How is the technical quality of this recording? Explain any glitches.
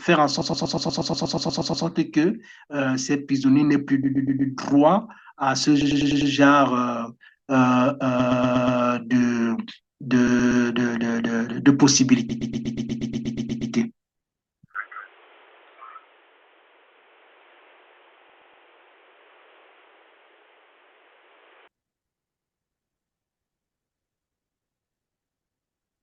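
The speech has two problems: a recurring stutter from repeated frames, and a stretch where the input switched to a poorer device.

Repeated frames at 0.41, 4.03, 5.81, 8.19, 10.27, 12.29, 18.29 and 22.19 s: a short block, mostly 120 ms (100 ms at 5.81 s), replays several times, giving a stutter that pads out the timeline.

From 14.75 to 21.68 s the sound turns dull and narrow, with nothing above 3.7 kHz, a level shift of about 5 dB and a faint new noise floor. It's likely the input switched to a poorer device.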